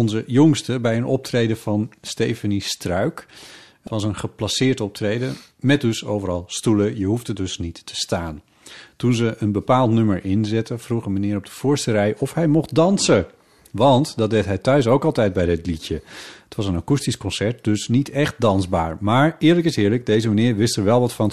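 At 3.84 to 3.87 s, just before "was een geplaceerd optreden", the speech breaks into a brief glitch. This is damaged data in a compressed stream: corrupted bytes make the decoder misread those frames and lose sync until the next valid frame header.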